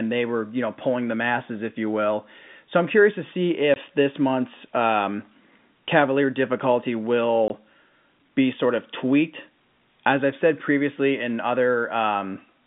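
At 3.74 s, between "I'm curious to see" and "this month's um", there's a 20 ms hole, and another at 7.48 s. That's packet loss filled with silence, probably a single dropped 20 ms packet each time, so the speech cuts dead with a hard edge on each side.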